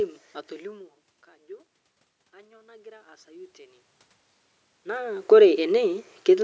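From 2.32 to 3.87 s there's automatic gain rising: the input fell about 24 dB, so the gain crept up about 7 dB, swelling voice and room noise together.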